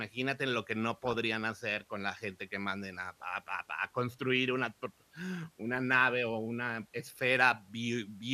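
From 0.92 to 1.18 s, after "lo que" and before "hacer con la gente", DAB burbling: a bit error rate of roughly 0.7 percent corrupts sub-band data. The spectrogram shows isolated bands flickering, and the speech is broken by short blips of noise.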